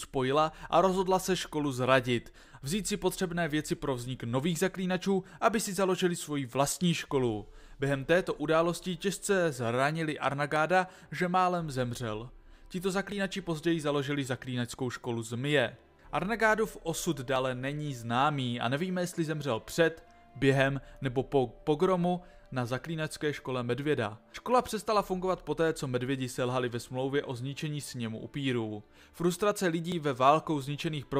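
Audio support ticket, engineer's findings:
Abrupt jumps in the sound at 10.56, 13.12, 17.36 and 29.92 s. Each loses roughly 20 ms, except 17.36 s, which loses around 70 ms. Likely dropped buffer (overrun) on capture: the input was not read before the hardware overwrote it, and the surrounding audio was spliced edge to edge. Unlike an underrun, there is no gap or silence, only a skip forward. The longer loss at 17.36 s suggests several consecutive buffers were lost.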